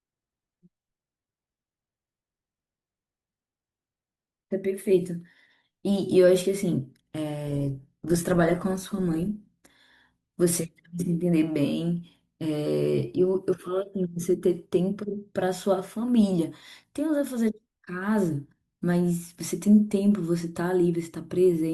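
A speech recording with one fault: an adaptive stream at a lower bitrate between 7.47 and 9.47 s. For those two seconds codec artefacts rise; the change is sudden, consistent with the player falling back to a lower-rate version, roughly Opus 16 kbit/s against 64 kbit/s elsewhere. The waveform shows no gap at either boundary.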